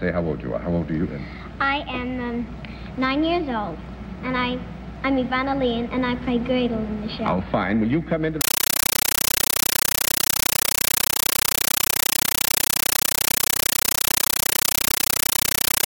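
At 8.41 s the sound gives way to harsh, very loud chattering static that runs right to the end. It's a compressed stream played as audio: a Dolby Digital (AC-3) bitstream went out as though it were plain samples and never got decoded. Each frame comes through as a 9.33 ms blast of noise and then silence, repeating at 31.25 Hz, and that's the buzzy flutter you hear. The pattern fits a 448 kbps stream.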